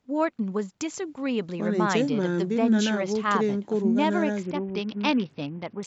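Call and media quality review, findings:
Bluetooth SBC bit pool drop, 4.43 s to end of clip: treble dulls, gritty noise rises. Probable component: A2DP link under congestion. Fewer bits leave top sub-bands starved and the rest coarsely quantised. Sound points to bit pool falling from about 31 to 7, near 61 kbps. Call microphone processing band-limits to 8 kHz with a bass high-pass; expected, not a fault.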